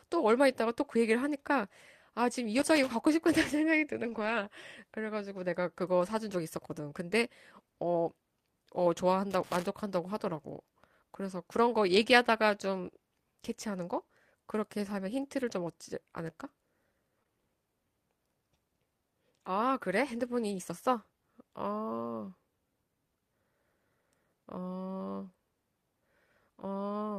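At 2.59 to 2.88 s and again at 9.31 to 9.66 s there are irregular bursts of loose connector crackle, each about a third of a second long. A worn or dirty contact in the signal path is making and breaking as it shifts, so the speech is chopped into fragments and overlaid with scratchy crackle. The bursts are uneven in spacing and level, which is typical of a mechanical contact fault rather than anything digital.

From 4.05 to 4.43 s the speech turns rougher and grainier. This is a lost packet rebuilt from error correction, a set of separate losses covering about 200 ms of audio, which fits ten 20 ms frames. Each missing frame was replaced by the lower-bitrate backup copy carried in the packet that followed it. There is no dropout, but the coarser encoding leaves the passage noisier than the speech around it. A much shorter repair of the same kind at 13.97 to 14.03 s covers about 40 ms and is heard as a brief patch of roughness.

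Between 17.19 and 17.28 s two overlapping short concealed packet losses occur, each with about 20 ms missing. The receiver bridged the holes by extending the preceding sound for roughly 19 ms and 14 ms, then cross-faded back into the real signal. This adds roughly ten milliseconds of length and produces a short smear with a wobble.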